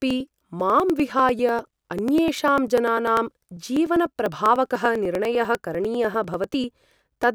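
A steady ticking runs through this speech recording from about 0.1 s to 7.23 s, a small click roughly every 0.099 s, so about ten a second and some seventy in all, heard only where there is signal. These are periodic USB or driver dropouts: something stalls the USB bus or audio driver at a fixed interval, and each stall skips about a millisecond of audio outright, leaving a tiny splice that jumps the waveform.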